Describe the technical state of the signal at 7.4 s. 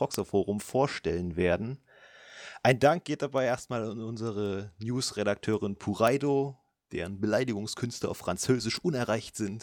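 Sharp, uneven clicks recur about every half second, and 7.4 s falls inside the run lasting from 0.14 s to 9.31 s. These are word clock ticks: an unlocked receiving clock, off by some tens of ppm, slips one sample at each collision.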